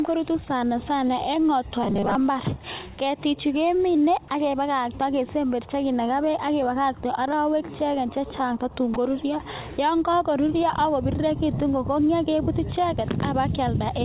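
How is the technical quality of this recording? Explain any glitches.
The recording has two brief glitches, both heard through a telephone-band path where nothing reaches above 4 kHz, consistent with G.711 mu-law at 64 kbps.

From 1.83 to 2.15 s the sound turns into robotic sound from repeated short buffers, a rigid metallic buzz at 200 Hz. The likely cause is audio arriving too late, so the receiver kept replaying a 5 ms slice while most of the real audio in that stretch was skipped. On a spectrogram this appears as evenly spaced horizontal harmonics of 200 Hz, and the waveform shows an identical short cycle repeating.

At 8.94 s a 20 ms piece of sound is dropped by the voice detector, which likely mistook it for background and stopped sending. The receiver filled the gap with comfort noise, so the signal briefly gives way to a flat, low-level hiss before resuming. The waveform shows a sudden small dip to a quiet noise floor, and the spectrogram shows a thin vertical slot of faint, even noise.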